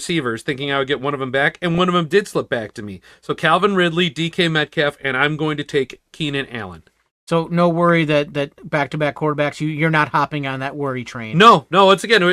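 From 1.71 to 1.78 s the speech is hit by DAB burbling, a short burbling burst over the audio. Weak reception let bit errors, at a rate well under one percent, slip past the error correction into the MP2 data. Corrupted samples put short blips of noise in single sub-bands, and corrupted scale factors make sub-bands jump in level for up to a frame, which fits a short run of six damaged frames.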